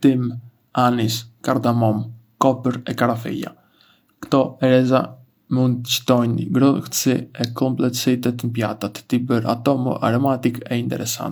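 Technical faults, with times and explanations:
No technical faults heard.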